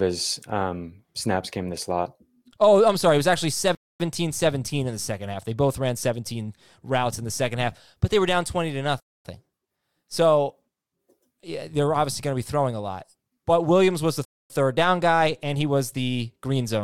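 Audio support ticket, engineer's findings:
Gap between chunks, speech. Hard-edged silent holes of 250 ms at 3.75–4.0 s (after "was actually"), 9.0–9.25 s and 14.25–14.5 s (between "was the" and "third down guy and"). Regular 5.25 s period: 5 s audio chunks with silence inserted at each join. Probable component: playback/streaming layer starting each chunk late, or codec padding. Unlike dropout, no content missing; sound resumes exactly where it stopped.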